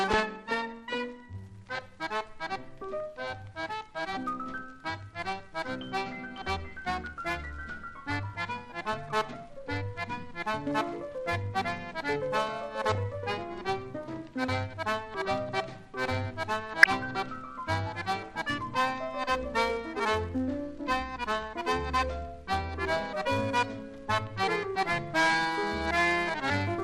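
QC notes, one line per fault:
throughout MP2 compression: dull, gurgling, granular sound with upper bands flickering in and out, likely from MP2 coding starved of bits, which fits about 80 kbps.
12.87–12.95 s and 16.81–16.95 s DAB burbling: short blips of noise in single sub-bands, from a small share of bit errors slipping past error correction into several audio frames.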